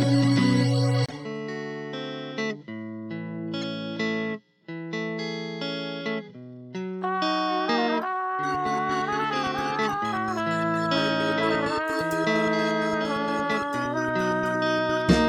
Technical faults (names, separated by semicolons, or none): corrupt frame decoded